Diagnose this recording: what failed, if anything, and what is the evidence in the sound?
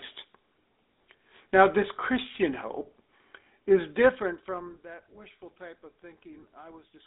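The codec stage failed here: the speech passed through a GSM full-rate codec, consistent with the old 13 kbps stream. It rebuilds the voice from a vocal-tract model excited by a sparse, regularly spaced pulse train, so the whole clip carries a plainly audible buzzy, gravelly texture. The band runs from about 250 Hz to 3.7 kHz with nothing above 3.8 kHz, which makes the speech dull and boxed-in.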